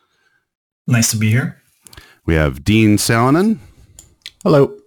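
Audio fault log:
Throughout, crude rate conversion: the speech carries a gritty, inharmonic fizz riding on the louder and brighter sounds. It's what you get when a sample-rate change just grabs the nearest existing sample instead of filtering properly. The skipped samples recur in a fixed cycle, and the spacing of the grit fits a 48 kHz to 44.1 kHz change. That cycle throws off tones unrelated to the voice, sitting maybe 25 dB down.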